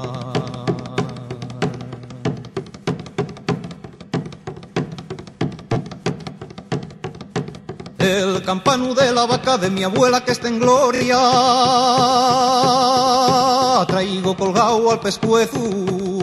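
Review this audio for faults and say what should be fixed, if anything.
Repeated frames at 5.73–5.75 s and 10.95–11.00 s: a short run of compressed data plays again, adding 26 ms and 52 ms of stutter. The waveform shows identical copied stretches. Writing or sending each frame exactly once, checked by sequence number, prevents it.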